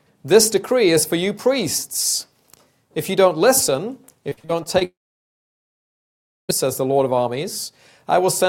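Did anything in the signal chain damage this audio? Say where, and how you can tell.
Yes. Between 4.29 and 4.83 s there is repeated packet loss, a network fault: six short holes, the longest 43 ms, each bridged by stretching the preceding sound, so about a third of that span turns choppy and robotic. Repeated brief gaps distinguish it from a single dropout.

From 4.85 to 6.51 s the sound stops for about 1.6 s, leaving a brief fading continuation and then roughly 1.56 s of silence before the audio resumes with that section missing. This is likely a long network dropout; unlike a mute or edit, it begins with concealment.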